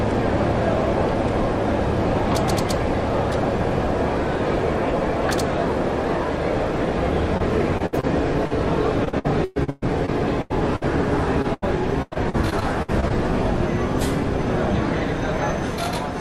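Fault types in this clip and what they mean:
Repeated packet loss (robotic sound): from 7.37 to 13.12 s, frequent short dropouts patched by repeating prior sound, giving choppy audio; spectrogram shows smeared, repeated frame blocks.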